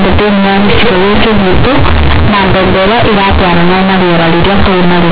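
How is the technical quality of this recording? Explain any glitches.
Poor: the speech is buried under loud, harsh, buzzy distortion from start to finish, and the pauses fill with strong noise rather than falling quiet. This is companded audio read as linear. The telephone-band sound, which fits mu-law G.711 coding, was played back as plain 8-bit samples without being expanded. Every sign change then throws the waveform across about half its range, so soft passages come out as large as loud ones and the signal's shape is badly bent.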